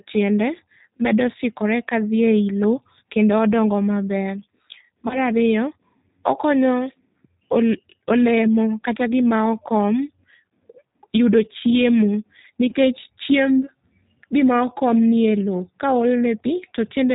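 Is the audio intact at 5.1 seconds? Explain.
No. Around 5.1 s there's a dropout, VoIP packet loss concealed by the speech codec, running from about 5.08 to 5.21 s. Roughly 20 ms of audio went missing, which fits two lost 10 ms frames. The decoder covered the gap by carrying its last pitch and vocal tract filter forward at falling gain, so the sound is briefly stretched and fades. Because each frame builds on the one before, the speech stays weak and smeared for tens of milliseconds or more after the actual gap.

That moment also carries the G.729 codec damage present across the whole clip. This is the 8 kbit/s G.729A flavour, which rebuilds speech from a vocal tract filter, a pitch predictor and a handful of pulses per half frame. Nothing above 4 kHz gets through, so the speech sounds muffled, and the coding adds a clearly audible rough, slightly synthetic edge.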